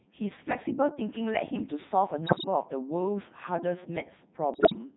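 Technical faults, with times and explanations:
Throughout: Codec 2 vocoder. The speech has the robotic, buzzy quality of a very low-rate vocoder that keeps only pitch, voicing, energy and a coarse spectral envelope, and rebuilds the voice from sine waves instead of preserving the waveform. The heavy coloration fits the top 3.2 kbit/s mode. Unlike bit errors, this damage is steady and even across the whole clip, with no sudden jumps in pitch or level.
2.26 to 2.44 s and 4.54 to 4.78 s: bit errors on digital voice radio. In these two short bursts the already synthetic voice lurches in pitch, loudness and tone colour and breaks into warbling, bleep-like gibberish. Corrupted bits are feeding the vocoder's pitch, level, voicing and envelope settings, and each one controls a whole frame, so every error upsets a full frame, with 8 frames hit in the first burst and 11 in the second. The second burst is the heavier one, with a bit error rate of around 15 percent against about 10 percent in the first. 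This differs from packet loss, which leaves gaps or smeared repeats, because here wrong parameters produce new, wild sounds.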